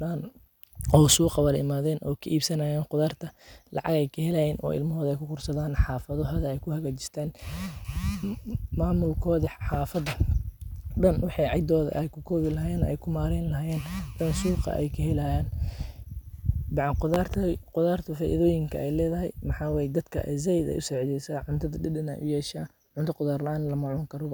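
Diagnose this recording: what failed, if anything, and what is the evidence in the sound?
Loud pops point to the analogue wiring. One pop at 9.74 to 9.77 s peaks about 10 dB above the speech. A double pop at 17.14 to 17.37 s, before "qudharta faidoyiinka", reaches about 15 dB. Speech continues underneath. A sudden voltage step, likely from a plug or switch, caused them.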